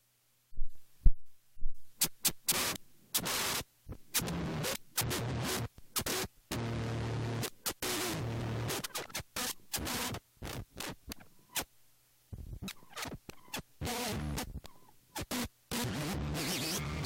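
At 0.76 s comes the first overlap between stream segments: two 2.0 s segments claim the same few milliseconds, and the player trims away audio that was never duplicated. A tiny skip results, seen as a sudden step in the waveform and a thin vertical line across the spectrogram.

From 2.07 to 2.54 s the sound behaves like a CD stuck on one turn. A 236 ms stretch replays twice, each jump back marked by a brief mute, giving a quick, even stutter. On a spectrogram the same short pattern repeats side by side, separated by narrow gaps.

The same segment-overlap skip returns at 8.70 s and 12.68 s, again as small skips where sound drops out at a segment boundary, each showing as a waveform discontinuity and a broadband vertical stripe.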